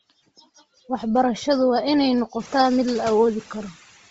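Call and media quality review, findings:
Noise suppressor artifacts, throughout: suppressor cutting bands judged steady noise, frame by frame, by about 11 dB. Residual noise sinks between words and rises under speech.

Bluetooth LC3 compression, throughout, likely cause: transform codec starving the upper spectrum. Nothing above 7.7 kHz, and the noise-filled highs give speech a grainy, breathy edge. The heavy damage fits about 24 kbps with 7.5 ms frames.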